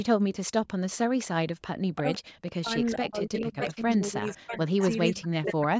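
Speech with an echo leak at 1.18–1.27 s, 3.16–4.9 s and 5.22–5.63 s. A copy trails the voice by about 0.5 s and then 0.6 s, growing from roughly 25 dB to 10 dB below it. On a spectrogram it shows as a delayed duplicate of the harmonics. It is likely a loudspeaker echo that the far end's canceller missed. Speech is suppressed in double talk at 1.87–2.21 s, 2.61–4.79 s and 5.12–5.72 s, with the voice dropping by up to roughly 40 dB in patches. The waveform shows sudden holes, and the spectrogram shows gaps. The likely cause is the echo canceller turning down both its own talker and the loudspeaker echo at once.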